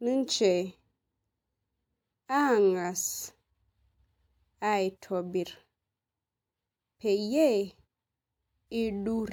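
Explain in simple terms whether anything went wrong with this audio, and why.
Nothing went wrong here: the speech comes through steady and unbroken, with no glitches or dropouts to point to at any moment.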